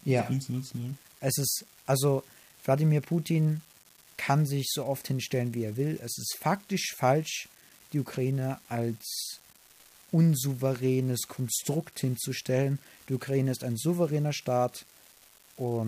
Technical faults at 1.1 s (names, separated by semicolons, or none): unreliable data bit